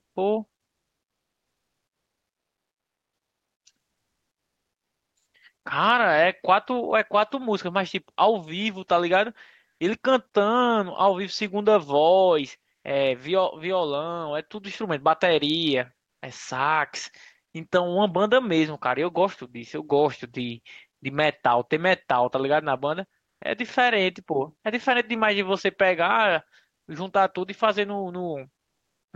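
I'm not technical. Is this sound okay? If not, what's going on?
No. Twice, during pauses, the background briefly turns into a flat, featureless hiss: from 9.71 to 9.79 s it gets slightly louder, and from 16.05 to 16.21 s it drops quieter. Both last under a fifth of a second. This is comfort noise in place of the background. It was likely caused by the call's codec, Opus, pausing transmission when nobody spoke, so the receiving end filled the gap with invented noise instead of the real room sound.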